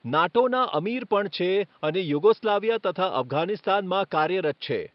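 From start to finish the speech carries a rough, hissy halo and a smeared, underwater blur, which points to the likely cause being Nellymoser compression, the old Flash microphone codec. It codes short fixed blocks at a flat two bits a sample, so weak bands get no bits and are filled with noise; the damage is plainly audible and fits a rate near 44 kbps. Unlike the swirly, metallic warble of low-bitrate MP3, this damage is rough and hissy, while the room noise sits about 41 dB below the speech.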